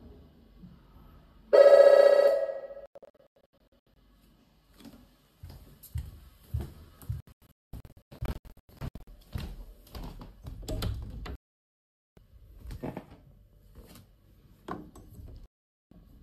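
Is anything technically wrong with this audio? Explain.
Yes. The audio has four digital broadcast dropouts: 2.86–3.97 s, 7.20–9.08 s, 11.35–12.18 s and 15.46–15.92 s. The receiver lost the signal or got frames that failed their error check, and muted until valid frames returned. The first two are broken into short holes, about 600 ms missing (longest 96 ms) and 1104 ms missing (longest 216 ms). The last two are near-solid silences of 816 ms and 456 ms. The material sent during these gaps is gone.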